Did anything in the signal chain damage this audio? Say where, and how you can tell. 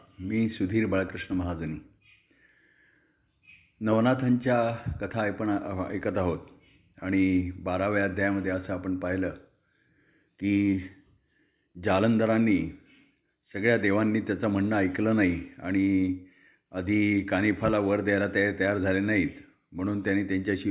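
No, nothing in this speech recording points to damage at any stage of the chain.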